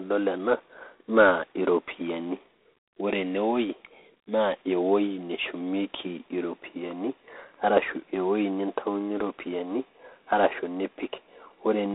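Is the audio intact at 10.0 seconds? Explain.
No. G.726 ADPCM coding runs through the whole clip, including 10.0 s. Each sample is sent as a coarse difference from a prediction, which fits 24 kbit/s. The speech carries a harsh, rasping hiss that tracks its level. The band is limited to 250 Hz to 3.7 kHz, with nothing above 3.8 kHz.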